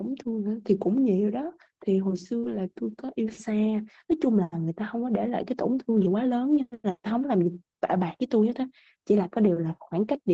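At 2.39 to 2.45 s, about 40 ms of the call arrived too late for the decoder, and the receiver covered roughly 34 ms of that hole with short concealed packet loss. It extended the preceding sound, carrying its pitch forward or filling it with shaped noise, then crossfaded back into the real signal. The result is a brief smear or wobble.

Overlapping that spot, from 2.43 to 2.57 s, the next stretch was a lost packet rebuilt from error correction. The packets that followed each carried a low-bitrate copy of the missing audio, and the decoder played those copies instead of leaving silence. About 80 ms was rebuilt this way, which fits four 20 ms Opus frames. The same repair happens again at 5.93 to 6.03 s, covering about 60 ms, which fits three frames. Both stretches are continuous, but they sound rougher and noisier than the audio on either side. The call itself is Opus at 24 kbps with audio up to 8 kHz, so the copies lose no extra top end, and the repair is heard as grain rather than dullness.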